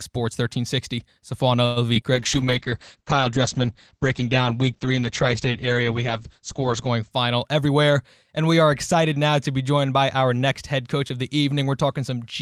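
At 1.65 to 1.78 s a call audio freeze stretches the last sound into a fading buzz or hiss for about 0.11 s, likely from delayed packets emptying the jitter buffer. The waveform shows a smooth decaying tail where speech should move on.

Short concealed packet loss follows at 1.94 to 1.97 s and 2.01 to 2.03 s. Each time about 20 ms of audio is missing, with about 8 ms and 5 ms synthesised, giving brief smears visible as smudged spectrogram columns.

A call bitrate drop runs from 2.14 to 7.17 s, falling from 40 to 9 kbps. The spectrogram's top edge falls from 20 kHz to 8 kHz, and the sound turns muffled and watery.

From 7.55 to 8.61 s a jitter buffer speed-up plays speech about 8% fast at unchanged pitch, trimming roughly a tenth of a second. The waveform shows slightly compressed, hurried syllable spacing.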